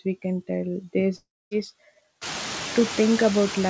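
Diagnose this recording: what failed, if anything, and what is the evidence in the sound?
Noise suppressor artifacts, call processing stage: throughout the speech, the background sinks by about 9 dB between phrases and swells back under them. After the room noise rises by roughly 20 dB near 2 s, the suppressor keeps lowering bands frame by frame.

Long network dropout, network stage: from 1.16 to 1.54 s, the sound continues as a fading synthetic buzz before roughly 0.24 s of silence. Speech resumes with about 0.36 s missing, a pattern that points to a likely burst of lost packets masked by concealment.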